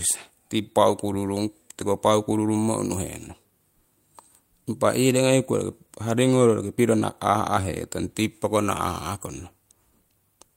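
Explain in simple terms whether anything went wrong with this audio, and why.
Nothing went wrong here: the speech comes through intact with no audible defects anywhere in the recording.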